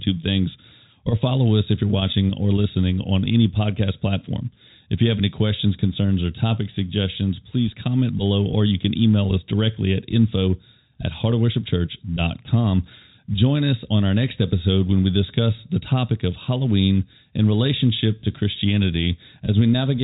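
Nothing stood out on listening to this speech, which is carried over G.711 telephone coding with nothing heard above about 3.8 kHz.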